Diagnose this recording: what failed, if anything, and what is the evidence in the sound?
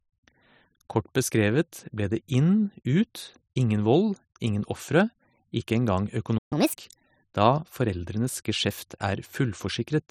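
A playback stall, likely the player's buffer running dry, dropped the speech into silence from 6.38 to 6.53 s, a gap of about 130 ms.

The player then caught up at higher speed, resampling its backlog at 1.5 times normal rate from 6.53 to 6.79 s, raising pitch roughly seven semitones.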